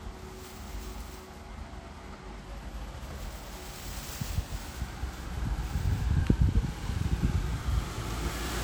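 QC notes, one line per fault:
Throughout, generation loss: the audio has a swirly, hollow character with smeared transients and blurred attacks, more degraded than a single pass would leave. This is likely repeated MP3 re-encoding, around four passes, with a character that fits roughly 96 kbit/s.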